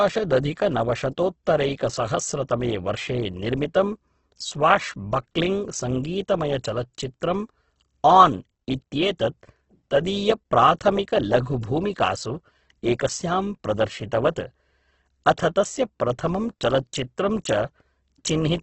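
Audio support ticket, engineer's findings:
Grainy, rough texture across the speech for the whole clip; band-limited, nothing above 8.2 kHz. Likely Opus compression in CELT mode: starved bands refilled by folding or noise instead of left empty. Heavy damage fits roughly 12 kbps. Less swirl than MP3, few spectral holes.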